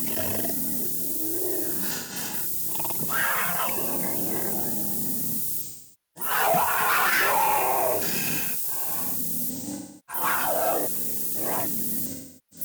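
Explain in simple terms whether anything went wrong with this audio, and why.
Low bit depth with noise shaping runs through the whole clip. The sound is stored with very few steps of loudness, which fits about 4 bits. The rounding error is pushed toward high frequencies, so a steady, thin hiss sits over everything, loud relative to the sound and brightest at the top.

AAC frame loss with concealment hits four times. At 1.91 to 2.33 s, short scattered dropouts (longest about 0.15 s) sound smeared and noisy. Longer losses at 5.62 to 6.30 s, 9.50 to 10.23 s and 12.06 s to the end fade down as the decoder guesses the missing sound, coming back in except at the end, where the clip stops first.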